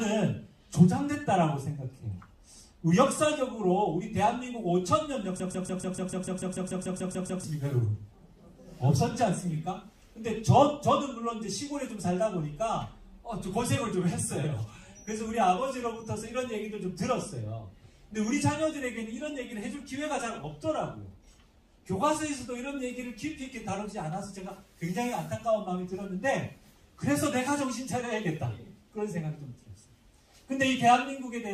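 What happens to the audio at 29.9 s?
Nothing goes wrong at 29.9 s; the audio runs through that moment intact, with no dropout, click or other fault.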